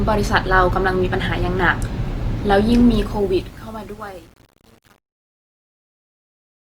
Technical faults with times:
0.00-6.77 Opus compression
2.92-6.77 truncation distortion on a fade

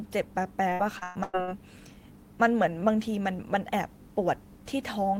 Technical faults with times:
0.69-1.49 repeated packet loss (robotic sound)

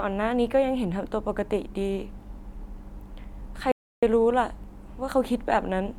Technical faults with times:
3.72-4.03 audio dropout to silence

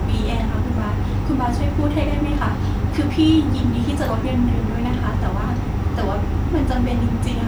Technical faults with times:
none

